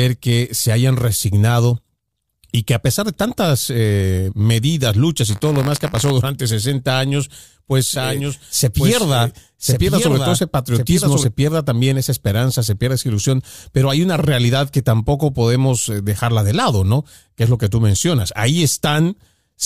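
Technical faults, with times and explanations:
5.29–6.11 s, buffer tearing: Just after "tantas eh medidas luchas", the writer and reader of the playback ring buffer slipped and crossed every period, so a small sliver of each buffer repeats audio about 20 ms old. The hard joins produce a 100 Hz robotic buzz.
7.96–11.24 s, doubled audio track: From just after "años pues" until "pierda también esa esperanza", a second full-band copy, likely from a slower duplicate capture path, runs around a second behind at about 5 dB lower. It has no reverberant tail and starts and stops abruptly.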